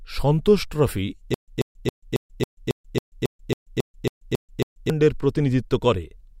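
From 1.34 s to 4.90 s, just after "সন্তোষ ট্রফি", a stutter with silent gaps: a 137 ms burst repeats thirteen times, each followed by 137 ms of digital silence, likely a stalled stream replaying its last fragment. Waveform and spectrogram show identical blocks alternating with flat gaps every 274 ms.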